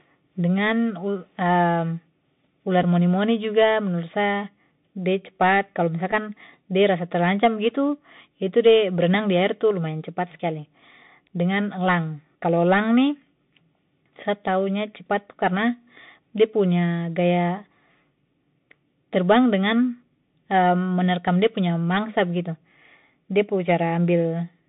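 Speech heard throughout through a Bluetooth CVSD headset codec: the band sits between 150 Hz and 3.7 kHz, sibilants turn scratchy and granular hiss underlies everything, unlike smooth lowpass muffling. A Bluetooth headset packet repeated twice, at 2.83 to 2.85 s and 6.12 to 6.14 s, each a brief tick about 7.5 ms long, which fits two lost packets replayed, too short for a sustained 267 Hz buzz.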